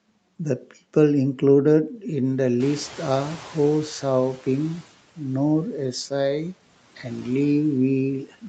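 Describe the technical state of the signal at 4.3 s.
At 4.3 s you're in the middle of the noise suppressor catching up, which runs from 2.6 to 4.87 s. The room noise jumped by about 14 dB around two and a half seconds in, and the suppressor's noise estimate is still trailing that rise. So the noise behind the speech comes through less reduced than it should, then sinks by about 10 dB as the estimate settles over roughly 2.27 s. That leaves the background louder than it should be at this moment, fading down shortly after, all within the 8 kHz call band.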